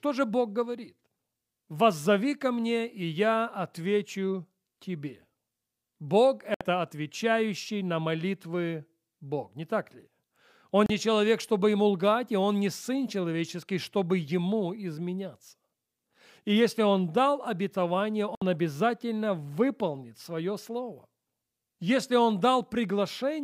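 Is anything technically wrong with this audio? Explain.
Yes. Three brief digital broadcast dropouts cut the speech. The receiver lost valid frames and muted, leaving short silent holes. They fall at 6.54 to 6.61 s, before "отвечающий на молитвы"; 10.86 to 10.90 s, before "не человек чтобы ему"; and 18.35 to 18.42 s, between "дал обетование" and "обязательно выполнит свое слово". The gaps last 64, 32 and 64 ms, which fits one or two lost frames each.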